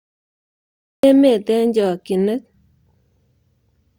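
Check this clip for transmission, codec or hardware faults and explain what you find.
There's one fault here, a cut-off start. The first 1.03 s is pure digital silence, and at 1.03 s the speech just appears, already mid-sound, right before "emet eng chokinet". What happened is that capture or the stream kicked in late, so whatever was being said before that point never got recorded. You hear it as an abrupt switch-on with no natural onset or build-up, the way a sound starts partway through rather than from its beginning.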